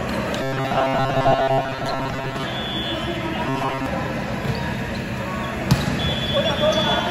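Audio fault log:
0.42 to 2.43 s and 3.47 to 3.86 s: robotic sound from repeated short buffers. A rigid metallic buzz at 134 Hz, likely from a chunk of about 7.5 ms replayed while most of the real audio is skipped. On a spectrogram it shows as fixed horizontal harmonics spaced 134 Hz apart, and the waveform shows identical cycles repeating.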